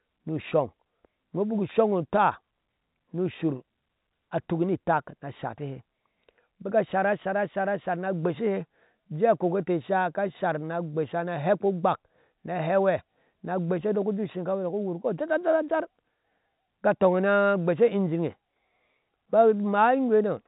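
Nothing goes wrong in this speech recording: it's just ordinary fixed-line telephone audio in G.711 A-law, with the band stopping at 4 kHz as that format always does.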